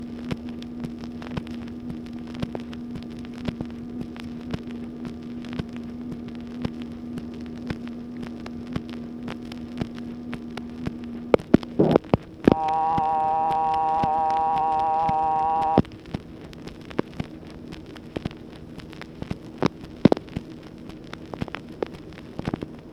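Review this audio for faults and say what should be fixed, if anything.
The whole clip has a wrong sample rate fault: everything runs about 1.38 times too fast and sits roughly 5.5 semitones sharp, with tempo and pitch shifted together by the same ratio. That locked pairing is what happens when samples are read out at a higher rate than they were captured at with no resampling in between, and this ratio fits material recorded at 32 kHz and played back at 44.1 kHz. To prevent it, resample to the output device's rate, or tag and honour the file's true rate, before playback.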